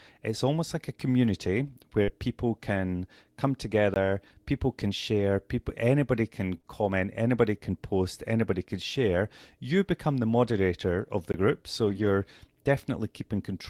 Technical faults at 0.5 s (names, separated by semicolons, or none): none